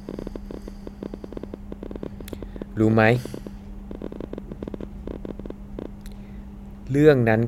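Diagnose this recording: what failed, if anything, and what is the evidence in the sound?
A train of clicks runs from 0.09 s to 5.86 s, around seventy similar pulses at about 12 per second with irregular spacing, peaking about 10 dB above the speech and audible in pauses. The likely stage is the analogue wiring, with nearby equipment injecting impulsive interference.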